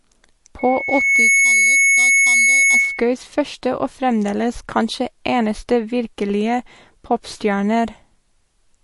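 Heavy data reduction, likely MP3 compression at a low bitrate that fits about 48 kbps, removes everything above 11.3 kHz and leaves the speech plainly watery and smeared throughout. From 0.59 to 3.11 s, just before "første og", a loudspeaker feedback squeal forms as the microphone picks up its own output. A 2.2 kHz tone swells over under a second to a few dB above the speech.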